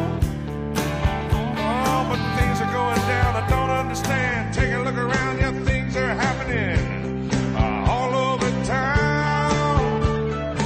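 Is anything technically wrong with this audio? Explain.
Yes. From 4.11 s to the end, an adaptive stream at a lower bitrate takes over. The player switched to a leaner encode, consistent with a drop to roughly 32 kbit/s, so treble above 9 kHz vanishes abruptly, with no gap. On a spectrogram the top band cuts off flat at 4.11 s.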